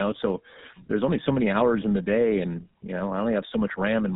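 Throughout, tandem speech coding re-codes the speech twice, consistent with iLBC then GSM full rate. It sounds rough, warbly and muffled, with smeared spectrogram harmonics and nothing above 3.8 kHz.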